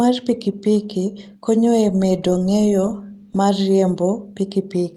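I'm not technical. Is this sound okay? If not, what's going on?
Yes, nothing in this recording stood out as a problem when I listened to it.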